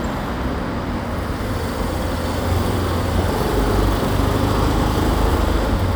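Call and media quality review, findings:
No findings in this call and media quality review; nothing in the sound of the clip is heard as a fault.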